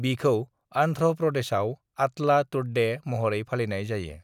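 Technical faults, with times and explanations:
No technical faults are audible.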